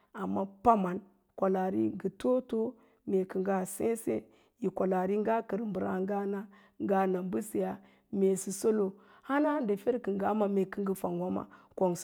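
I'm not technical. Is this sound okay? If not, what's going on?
Yes, nothing in this recording points to a technical problem with how the sound was captured or carried.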